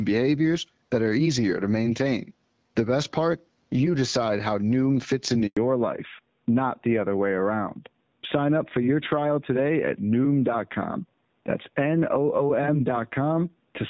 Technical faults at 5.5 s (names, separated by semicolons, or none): handover gap; fallback to narrowband